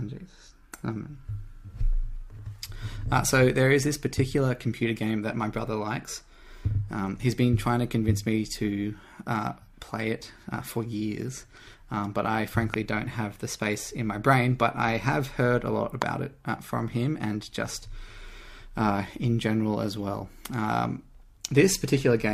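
Two loud pops, at 12.74–12.76 s and 16.02–16.04 s, spike roughly 20 dB above the audio, which continues underneath; likely a voltage transient from a plug, switch or static.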